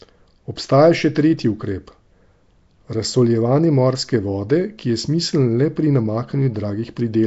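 It's a speech clip with a rough, hissy halo and a smeared, underwater feel all the way through, and nothing above about 7.7 kHz. That points to Nellymoser compression, likely the old Flash microphone codec at a low rate around 32 kbps, filling starved bands with noise.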